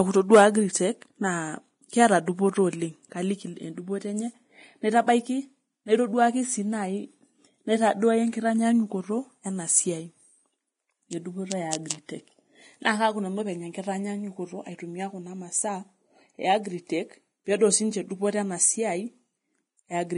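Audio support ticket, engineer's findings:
Vorbis compression, likely cause of full-length damage. Encoder starved of bits, sound consistent with a ~30 kbps setting. Treble quantised to grainy hiss, speech roughened and attacks blurred, hard band limit with nothing above 10.6 kHz. Heavy damage throughout.

Pre-echo, 11.10–11.13 s. Transform block spreading its quantisation noise across the whole block, so noise sized for a sharp attack fills the quiet moment before it. Short hiss of about 24 ms leading the onset, which lands soft and smeared.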